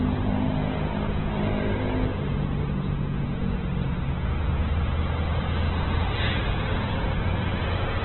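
Opus compression throughout, likely near 8 kbps: nothing above 4.1 kHz remains, and noise-filled bands leave these everyday sounds rough and grainy.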